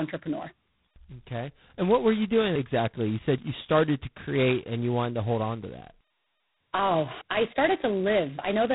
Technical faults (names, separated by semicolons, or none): G.726 ADPCM